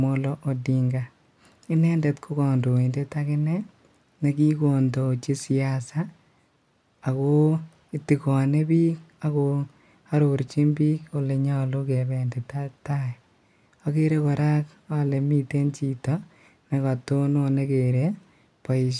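No technical faults turn up at any point in the recording, so there is nothing to describe in time order.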